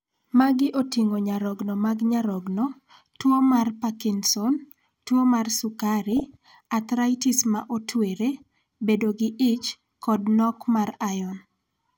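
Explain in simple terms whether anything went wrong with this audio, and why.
Between 6.12 and 6.46 seconds, the speech briefly has a bubbling, squelchy gurgle with little chirps, like mud popping. This is DAB burbling, a digital radio reception fault. The signal was weak, so a small share of the data, under one percent, arrived damaged, and some got past the receiver's error correction. The decoder then rebuilt parts of the sound wrongly, making narrow slices of pitch jump up and down in loudness for a fraction of a second.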